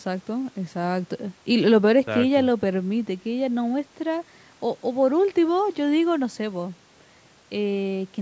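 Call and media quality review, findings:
Nothing stood out on listening to this speech, which carries the expected call microphone processing with its band topping out around 8 kHz.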